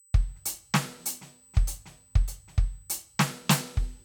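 From start to finish the music carries a thin, steady whine at 8 kHz, which is classic USB whine. The bus pulls current in bursts every 125 microseconds, and that 8 kHz pulse rate leaks into the audio through shared power or ground. It sits roughly 35 dB under the music, so it's faint but fixed in pitch, a high, glassy tone that never moves.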